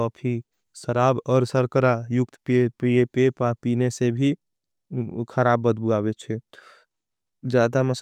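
No technical faults can be heard anywhere in this speech recording. There is nothing to locate in time and nothing to explain.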